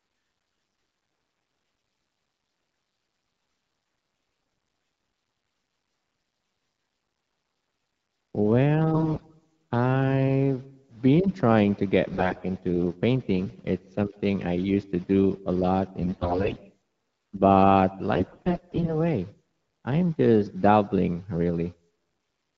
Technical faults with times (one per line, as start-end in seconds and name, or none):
8.94-9.44 AMR bit errors
12.14-12.45 AMR bit errors
16.01-16.60 AMR bit errors
18.14-18.98 AMR bit errors